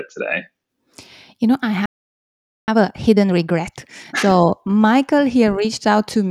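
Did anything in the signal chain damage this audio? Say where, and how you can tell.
Yes. The damage happened at playback. A playback stall cuts the speech off at 1.86 s. The output goes silent for about 0.82 s, until 2.68 s. Then the speech resumes. A gap this long in mid-flow does not come from the source or from a codec artefact. The likely cause is that the player ran dry of buffered data or that its output thread was held up. In either case nothing reached the output.

Time-compressed catch-up follows straight after. From 2.68 s to 4.32 s the speech runs at 1.5 times its normal pace, but its pitch stays where it was. The player is clearing the backlog built up during the silence. It removes short slices of audio and cross-fades across the joins. That shortening causes the rush.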